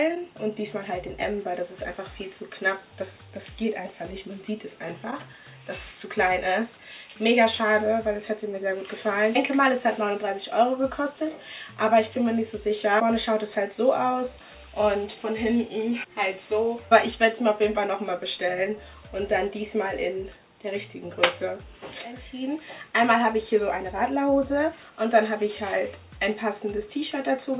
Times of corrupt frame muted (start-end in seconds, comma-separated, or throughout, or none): none